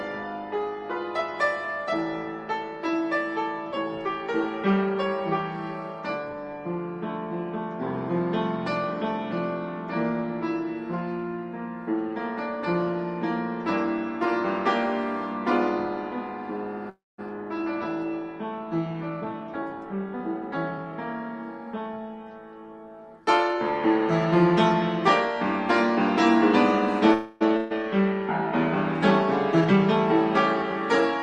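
Call audio freeze at 16.89 to 17.20 s and again at 27.13 to 27.43 s: the sound stalls and the last moment is stretched into a buzzy hiss. The first lasts 289 ms and fades into about 200 ms of silence. The second lasts 272 ms and never goes silent. The audio then resumes where it stopped, so nothing is lost, but the delay grows by about the same amount. This is likely packets held up in transit until the jitter buffer ran dry. Burst of packet loss at 27.57 to 27.84 s: about 140 ms of audio is missing, filled with a held, fading continuation of the preceding sound before playback jumps ahead. Jitter buffer speed-up at 18.94 to 20.93 s and at 29.61 to 29.83 s: pitch stays the same but the pace quickens, to 114% in the first stretch and a clearly hurried 154% in the second. The receiver cut out tiny pitch-period slices, roughly 0.3 s and 0.15 s in total, to drain excess buffered delay.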